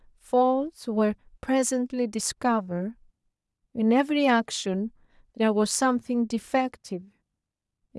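No technical faults can be heard anywhere in the recording.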